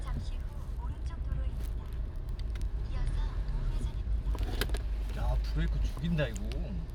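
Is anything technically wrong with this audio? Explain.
No technical faults are audible.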